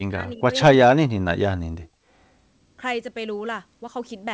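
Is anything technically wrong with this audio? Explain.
Yes, there's one. The speech gets pushed way down twice, from 0.00 to 0.53 s and again from 1.06 to 1.93 s. The level drops by something like 40 dB, nearly to silence, for about half a second in the first stretch and most of the second. That's likely speech suppressed in double talk: the echo canceller couldn't separate the near talker from loudspeaker echo while both sides were talking, so it clamped everything. The audio tops out around 8 kHz, which fits a G.722 wideband call.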